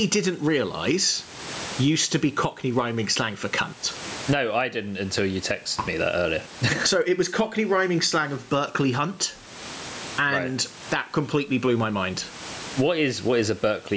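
Right from the start and all the way through, there's gain pumping: the level gets yanked down the moment the speech comes back in, by something like 25 dB. That's most likely the input gain set far too hot with a fast limiter clamping it on each loud syllable, so everything feels squashed. The room noise sits about 36 dB under the speech, and the call processing tops out around 8 kHz.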